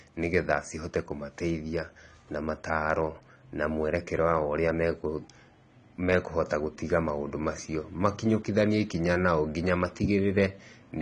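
AAC compression, throughout the speech: nothing above 10 kHz, dull and smeared, likely AAC-LC quantising the spectrum coarsely at a bitrate near 32 kbps.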